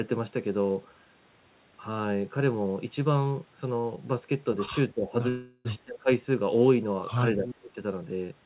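At 3.80 s a short stall from a late packet holds the last sound for 34 ms with a slight buzz or dip. It is brief, and the speech resumes with nothing missing rather than skipping ahead.

From 4.94 to 5.15 s, 5.84 to 6.10 s and 7.36 to 7.76 s, the level dips by about 10, 20 and 25 dB respectively. This is likely speech suppressed in double talk, a duck tied to the other side talking, not a clean packet dropout.

Between 5.29 and 5.67 s a call audio freeze likely stretches the last sound for 360 ms as a buzz or hiss that fades. It is far longer than the stall and never reaches silence.

At 7.46 to 7.55 s a copy of the speech returns 273 ms late, about 10 dB down. This is likely an echo leak, and the discrete delay separates it from room reverberation.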